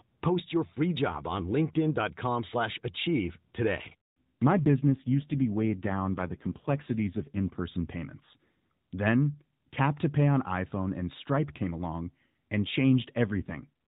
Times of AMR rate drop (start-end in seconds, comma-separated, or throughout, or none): 4.52-7.60, 13.28-13.69